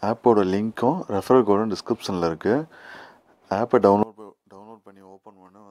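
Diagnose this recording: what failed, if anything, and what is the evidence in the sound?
From 4.03 s to the end, the sound collapses by about 25 dB, leaving a faint residue. One channel inverted, likely in analogue wiring, cancels shared content when summed to mono.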